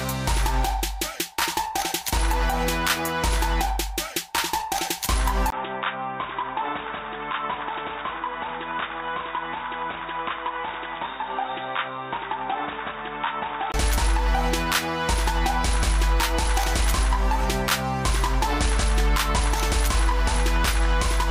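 At 5.50 s there's a 20 ms dropout, and then the audio goes dull and boxy. Nothing comes through above 3.8 kHz, the level falls by roughly 10 dB, and a new noise floor appears about 30 dB under the signal. Full bandwidth returns at 13.74 s. That pattern points to the input switched to a poorer device, likely a second mic or a headset call profile, for that stretch before switching back.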